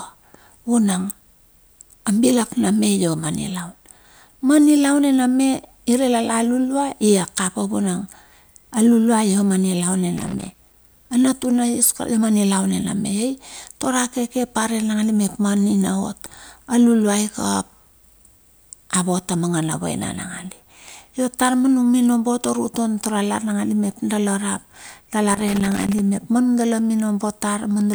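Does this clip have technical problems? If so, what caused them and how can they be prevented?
Yes: loose connector crackle in this speech, from 10.17 to 10.74 s and 25.30 to 25.99 s, just before "mep ma nudala". A worn contact making and breaking chops the signal, showing as ragged waveform dropouts and broadband vertical streaks on a spectrogram. Cleaning or replacing connectors and securing cables prevents it.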